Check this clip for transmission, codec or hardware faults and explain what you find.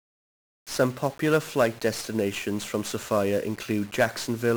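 One codec fault runs through the whole speech clip: 1-bit DFPWM compression, heavily damaged. Each sample is just an up-or-down nudge to a tracking level, so the error becomes loud broadband noise: fuzzy, crackly, treble drowned in hiss, which fits a single bit per sample at around 48 kbps.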